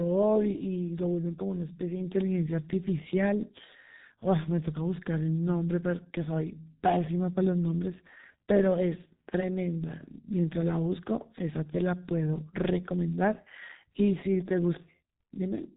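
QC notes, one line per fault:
Throughout: G.723.1 codec. The speech is band-limited with nothing above about 3.8 kHz, so it sounds muffled and boxy. Heavy codec damage adds a hoarse, buzzy texture, and consonants smear into the vowels around them. The codec works in 30 ms frames and refreshes its model of the voice only slowly, so quick articulation is averaged away. The coarseness points to the low-rate mode, around 6.3 kbit/s.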